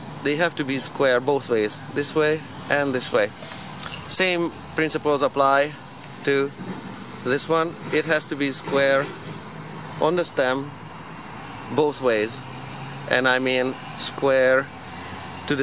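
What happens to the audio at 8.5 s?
Nothing goes wrong at 8.5 s; the audio plays through that moment intact, with no dropout, click or distortion.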